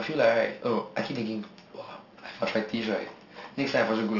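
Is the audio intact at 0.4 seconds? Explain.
No. At 0.4 seconds the speech carries aliasing, as it does throughout the clip. The audio was resampled from 16 kHz down to 12 kHz without an anti-aliasing filter, so content above 6 kHz folds back below that line as spurious, unrelated frequencies, roughly 20 dB under the speech. Sibilants sound gritty and metallic. On a spectrogram, energy runs hard up to 6 kHz with mirrored, downward-sloping traces where rising high components should be.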